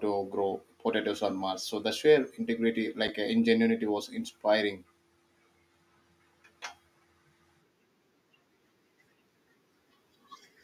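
At 3.08 s there's a block of digital silence, an 8 ms stretch where the speech drops straight to zero and comes back with no fade. Those hard edges give you a quick tick just before "uh ingenuity was inspiring", the sort of gap left when an output buffer isn't filled in time.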